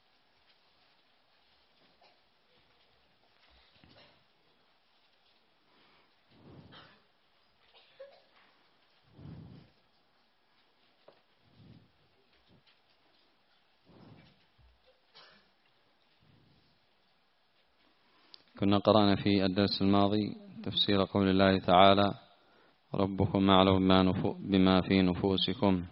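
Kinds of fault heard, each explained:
Nothing stood out on listening; no fault of any kind could be heard anywhere in the audio.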